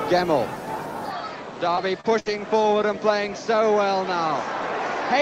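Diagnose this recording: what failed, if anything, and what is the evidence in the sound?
Input stage: from 1.10 s the sound turns duller and about 5 dB quieter, with a new noise floor roughly 55 dB down. The spectrogram shows nothing above 7.8 kHz, likely from a switch to a poorer input device.

Network, short concealed packet loss: smeared, wobbly patches at 1.75–1.79 s and 2.01–2.06 s. The decoder extended the preceding sound to fill 12 ms and 31 ms where 20 ms and 40 ms of audio went missing. Each shows as blurred, repeated-looking texture on the spectrogram.

Codec, lost packet rebuilt from error correction: rougher, noisier 20 ms stretches at 1.77–1.79 s, 2.26–2.28 s and 2.72–2.74 s. Low-bitrate Opus redundant copies replaced the lost frames. Each appears as a grainy vertical band.

Network, burst of packet loss: at 2.20–2.28 s about 60 ms went missing. The concealment continued the last sound and faded it, leaving a held, decaying stripe before the audio resumes further on.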